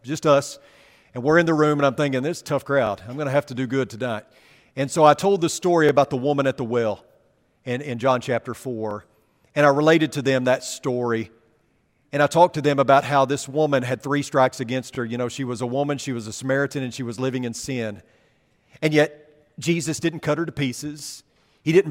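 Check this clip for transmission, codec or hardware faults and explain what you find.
Yes, there is one fault in this speech: overlapping chunks, at 2.87, 5.89, 8.91, 11.93, 14.95, 17.97 and 20.99 s. The first comes right after "I'm thinking this tough", the second after "I told the story", and the sixth after "was living in sin". The audio was handled in 3 s chunks, each starting about 21 ms before the previous one ended. That slice replays at every join and is heard as a brief stutter-click every three seconds.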